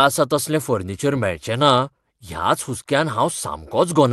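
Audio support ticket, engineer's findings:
Nothing stood out on listening to this speech recording as it came through the call path.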